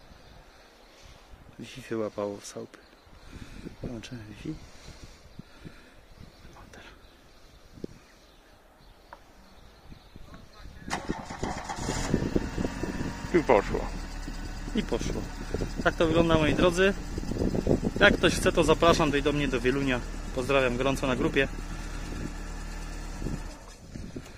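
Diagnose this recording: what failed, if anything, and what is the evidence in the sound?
Nothing in the signal chain points to a failure, with no dropout, click, level jump or timing break audible at any point.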